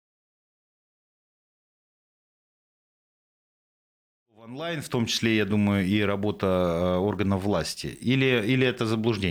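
Nothing here counts as a fault, just a smooth editor's fade in that begins around four and a half seconds and reaches full level by 5.3 s, with no click or hard edge anywhere in it.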